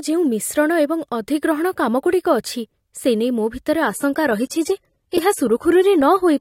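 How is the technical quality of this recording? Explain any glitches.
Quality holds until a sudden drop partway through, with no gap.

From 3.81 s, just after "ସେ ନେଇ ମୋ ଭିତରେ", to the end at 6.41 s, an adaptive stream switches to a lower bitrate, likely AAC falling from 96 to 32 kbit/s. Codec artefacts rise. On a spectrogram the upper band turns patchy, with nothing above 16.5 kHz.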